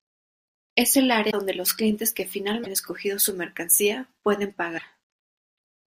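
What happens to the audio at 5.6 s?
Nothing goes wrong at 5.6 s: the audio continues cleanly through that moment with no dropout, click, distortion or other fault.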